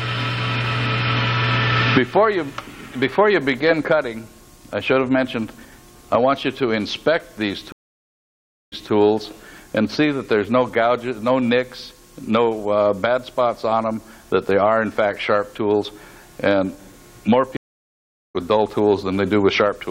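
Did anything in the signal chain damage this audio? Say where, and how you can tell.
Yes: at the network stage, two stream reconnects restarted the decoder mid-stream. The audio drops out at 7.72 s for 1.0 s and resumes 0.19 s earlier, then at 17.57 s for 0.78 s, resuming roughly 0.7 s later.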